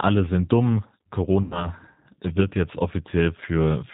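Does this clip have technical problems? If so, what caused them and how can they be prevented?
Yes. G.729 codec damage runs through the whole clip: the speech is rebuilt from a vocal tract filter, a pitch predictor and a few pulses per frame, so it sounds plainly rough and synthetic, with nothing above 4 kHz. That fits an 8 kbit/s G.729A link. Using a wideband codec such as Opus or G.722 at a higher bitrate would prevent this.

VoIP packet loss concealed by the speech codec occurs from 1.42 to 1.69 s. About 90 ms of audio was missing, which fits three lost packets. The decoder extended its last pitch and filter with falling gain, producing a fading buzzy tone or coloured noise, and the speech stays weak until its frame history recovers. Better network quality of service, a larger jitter buffer or forward error correction would prevent it.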